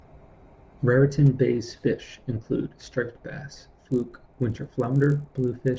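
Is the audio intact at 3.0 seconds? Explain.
Yes, at 3.0 seconds the speech plays through intact, with no audible fault at that moment.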